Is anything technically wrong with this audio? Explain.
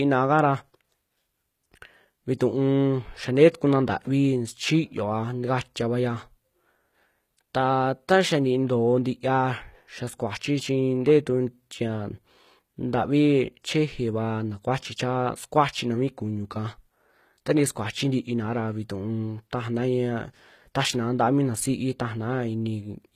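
Yes. HE-AAC compression runs throughout the speech, and its damage is plainly audible. The audio has nothing above about 14.9 kHz, and the treble that remains sounds rebuilt rather than captured, which points to a likely low-bitrate HE-AAC encode, around 20 kbps. Only the lower spectrum is coded in full. The upper bands are copied up from below and shaped by a coarse envelope, so their harmonics no longer line up with the real ones. S sounds come out gritty, metallic and lispy.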